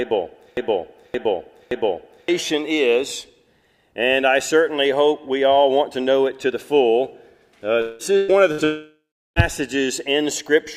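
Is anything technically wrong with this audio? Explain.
Yes, there are three kinds of fault.

From the very start to 2.28 s, the same 0.57 s fragment plays back to back, repeating three times and already under way when the clip begins. This broken-record loop likely comes from a stalled player or stream resending the last piece it held, so the audio meant for that stretch never plays.

At 7.81 to 8.02 s, and again at 8.64 to 9.39 s, the sound smears into a fading buzz or hiss. The second gap ends in about 0.36 s of silence. These are likely long network dropouts, where nothing arrived and the receiver stretched out the last sound. About 0.18 s and 0.72 s of audio are skipped.

Two shorter holes come between them, at 8.17 to 8.31 s and 8.52 to 8.61 s, each heard as a brief held buzz or fading hiss before the sound jumps ahead. These are bursts of packet loss. The receiver covered about 112 ms and 61 ms of missing packets by continuing the last sound and turning it down.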